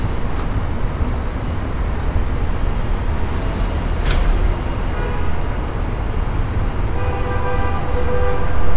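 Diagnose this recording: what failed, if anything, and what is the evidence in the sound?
Nothing in the signal chain failed: the sounds in the recording arrive with continuous level and timing, with nothing in the audio pointing to a broken stage anywhere from capture through to playback.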